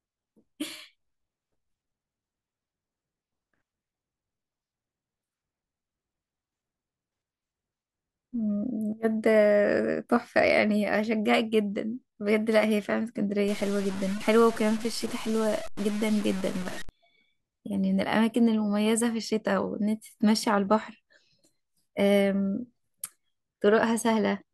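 From 13.48 s to 16.89 s the speech turns grainy, likely from low bit depth without dither, with truncation to something like 5 bits leaving error about 15 dB below it. Unlike steady hiss, this grit follows the speech's level and thins toward silence as it quietens.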